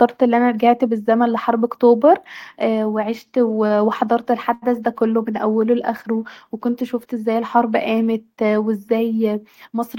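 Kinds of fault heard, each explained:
Short stall from a late packet: at 4.54 s a sound in the speech is held for about 85 ms, until 4.64 s, with a faint buzz or dip. A packet arrived late, the jitter buffer ran dry, and the receiver stretched the last sound, then resumed where it stopped, losing nothing.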